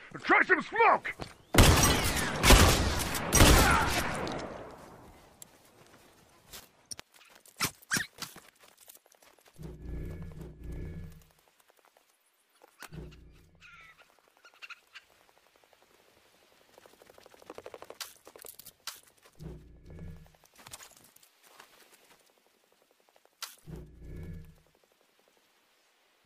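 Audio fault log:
No fault can be heard anywhere in this clip. There is nothing to log against any point in the audio.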